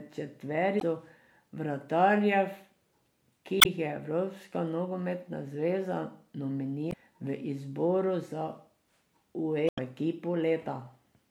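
Speech with damaged data in a compressed stream. Brief glitches break in at 0.77–0.83 s, 3.58–3.66 s, 6.89–6.94 s (just before "v izboru za") and 9.66–9.79 s. Corrupted bytes made the decoder misread frames and lose sync until it found a valid header.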